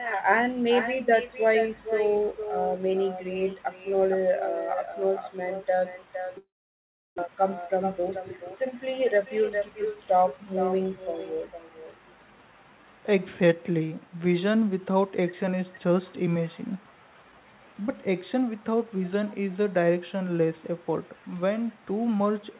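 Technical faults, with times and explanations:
Throughout, echo with no canceller: a quieter, thinner copy trails every phrase by about half a second at about -8 dB, unlike room reverb, which never repeats distinctly.
6.38–7.20 s, long network dropout: the sound smears into a fading buzz, then goes silent; when audio resumes about 0.6 s is simply gone, likely lost packets rather than an edit.
7.27–9.50 s, jitter buffer speed-up: delivery runs about 8% faster at unchanged pitch, trimming roughly 0.2 s of backlog; a sped-up recording would also raise the pitch.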